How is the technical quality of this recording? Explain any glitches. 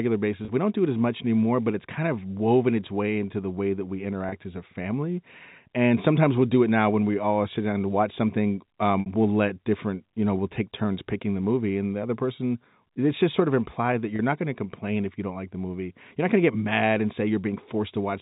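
Four brief dropouts interrupt the telephone-band audio, which carries no audible G.711 coding damage. Packet loss with pitch repetition occurs at 0.45 s, 4.29 s (between "the way that we" and "as a family"), 9.0 s (after "down to watch something", before "we'll let different you") and 14.16 s (after "sort of implied that", before "not going to complain"). Each gap is 30 ms, except the 60 ms one at 9.0 s, which fits two consecutive lost packets. The receiver filled each gap by repeating the last pitch period, so the speech briefly holds on a slightly buzzy, sustained tone before resuming.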